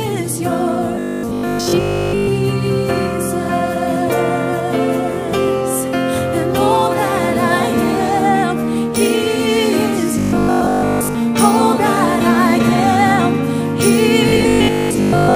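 From 0.95 to 2.29 s, 10.19 to 11.15 s and 14.29 to 15.35 s, the audio turns into a rigid, metallic buzz at 50 Hz: robotic sound from repeated short buffers. The likely cause is audio arriving too seldom, so a 20 ms chunk is replayed while most of the real audio is skipped. The waveform shows identical 20 ms segments repeating, and the spectrogram shows evenly spaced vertical stripes with harmonics stacked at 50 Hz multiples.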